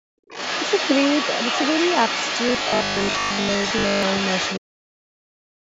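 From the very start to 0.28 s, the background is gated by the echo canceller. While the far end's audio played through the loudspeaker, the canceller clamped the microphone hard, pulling the room sound down by about 40 dB for roughly the first third of a second before releasing. On a waveform, the opening is an almost flat line that widens abruptly into normal background. A spectrogram shows a dark, empty band across all frequencies that ends in a sharp vertical edge.

From 0.28 s to 4.6 s, the other side's voice leaks through. A second voice runs under the main speech, only a little quieter than it. This is likely the loudspeaker playback reaching the microphone and getting past an echo canceller that removed only part of it. On a spectrogram, two overlapping sets of harmonic stripes with independent pitch contours show this leakage, and the waveform stays busy even where the main talker pauses.

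Between 2.49 s and 4.03 s, robotic sound from repeated short buffers sets in. Most of the audio in this stretch is a replay of the last fragment rather than new material. This is likely because fresh audio arrived too rarely. The repeats impose a rigid 50 Hz buzz, which fits a 20 ms buffer. The spectrogram shows evenly spaced horizontal harmonics at multiples of 50 Hz, and the waveform shows the same short shape copied over and over.

From 4.59 s to 5.59 s, speech is suppressed in double talk. With both sides talking at once, the talker's voice dips and breaks up by around 40 dB for about a second. The likely cause is the canceller failing to separate its own talker from the echo and turning everything down. The waveform envelope collapses in ragged chunks, and the spectrogram shows the speech harmonics and high end fading in patches. The call processing's high-pass filter, with the lowest bass removed, stays visible throughout.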